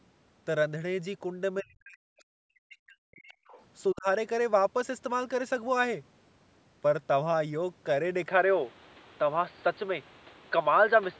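From 1.62 to 3.34 s the speech repeatedly dips and drops out, by as much as about 40 dB across roughly one and a half seconds. This is speech suppressed in double talk, likely from the echo canceller ducking the talker, and it shows as hollowed-out gaps in the waveform envelope. From 3.33 to 3.63 s a faint second voice, about 30 dB below the speech, leaks through. This is the other side's voice leaking through, appearing as weak, separate harmonic traces on the spectrogram. A shorter suppression from 3.93 to 4.07 s pulls the level down by about 15 dB, visible as a brief notch in the waveform. At 8.28 s the input switched to a poorer device, likely a lower-grade microphone, and this lasts to the end. There is no gap at the switch. The sound turns duller, the level shifts by about 5 dB, and new noise sits about 30 dB below the speech. On the spectrogram the energy now stops short of the earlier 8 kHz limit.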